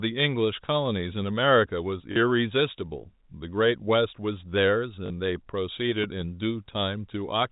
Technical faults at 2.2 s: packet loss with last packet repeated

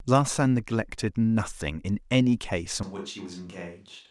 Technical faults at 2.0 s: none

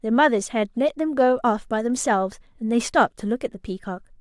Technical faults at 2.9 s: none

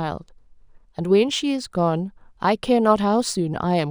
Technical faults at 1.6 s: crude rate conversion

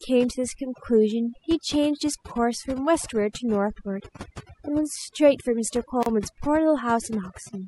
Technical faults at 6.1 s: overdone noise removal; gap at a join of encoded pieces

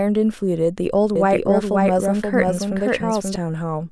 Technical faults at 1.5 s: doubled audio track

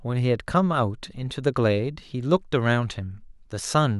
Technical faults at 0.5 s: none

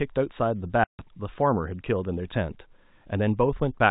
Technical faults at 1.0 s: packet loss filled with silence

